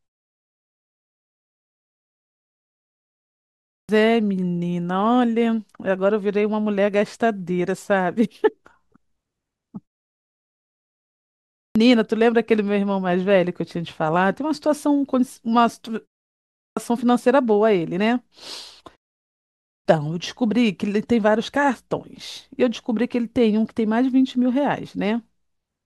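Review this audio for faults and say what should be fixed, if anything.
Clipped start after a pause occurs four times: at 3.5 to 3.89 s, 11.4 to 11.76 s, 16.4 to 16.77 s and 19.5 to 19.85 s, each time after a gap of between 0.41 and 3.5 s. Roughly 350 to 390 ms of speech is lost at each onset while the output device wakes and relocks. On a waveform, each phrase begins as a hard vertical edge out of flat silence, with no gradual rise. A spectrogram shows energy switching on at full strength across all frequencies at once, with the first sounds of the word missing. The pauses between phrases cost no speech. To prevent this, keep the output stream open through silence, or disable the device's idle power-saving so playback starts without a wake-up delay.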